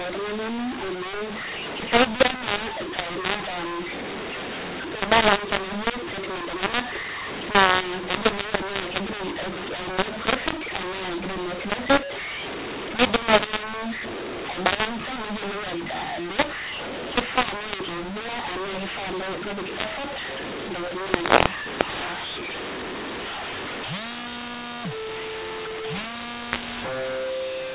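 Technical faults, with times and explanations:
Throughout: mu-law and A-law mixed up. Speech coded as mu-law is decoded as A-law. Levels scramble, so speech turns harsh and pauses fill with noise.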